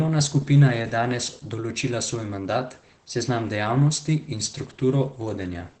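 Opus voice compression affects this speech clip from start to finish. Nothing is heard above about 9 kHz. The linear-prediction coder's coarsely quantised excitation plainly makes the voice hoarse and slightly robotic, which points to SILK voice mode running at a low bitrate, around 12 kbps.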